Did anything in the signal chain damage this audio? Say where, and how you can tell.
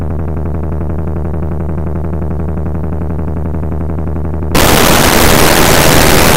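Yes. From about 4.55 s to the end at 6.37 s the audio turns into loud, harsh broadband noise, which points to samples built from the wrong bytes at the sample-format conversion stage. The reader is pairing bytes wrongly, whether off by one, swapped in order, or misaligned, so the jittery low bits land in the high positions and dominate every value.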